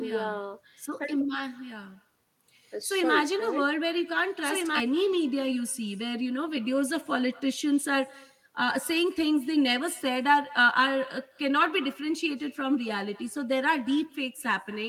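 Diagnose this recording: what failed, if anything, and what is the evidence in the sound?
Call processing failed at the far end: this is echo with no canceller. Throughout the speech, every phrase returns about a fifth of a second later at about 23 dB below the original, sounding thinner than the direct signal. That colouring shows the sound travelled out of a loudspeaker, through a room and back into a microphone, with no echo canceller removing it. A doubled track would instead sound clean and full-band.

From the start of the clip until 4.8 s there is a doubled audio track, already under way when the recording begins. A full-band copy of the speech trails about a second and a half behind, only a few dB quieter than the original. It has no decay or room character and stops abruptly at 4.8 s. Unlike the echo, it is neither thinned nor reverberant, which likely points to a second, slower capture path or an edit that left two offset copies mixed together.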